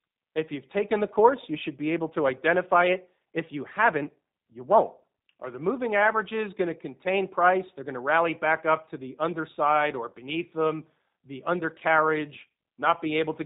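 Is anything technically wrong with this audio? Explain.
Yes. G.729 codec damage is plainly audible throughout: the speech is rebuilt from a vocal tract model and sparse pulses, so it sounds rough and synthetic, with nothing above 4 kHz, consistent with an 8 kbit/s stream.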